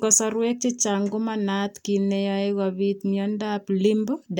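No technical faults can be heard anywhere in the speech. There is nothing to place on a timeline.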